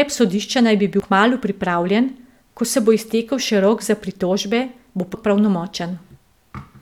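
It's a speech clip with two short bursts from damaged data in a compressed stream: a blip at 1.0 s between "sodišča naj bi bil" and "kmalu pripravljen ko se", and another from 5.13 to 5.15 s after "rok za pritožbe bo". The corrupted bytes throw the decoder off until it resyncs.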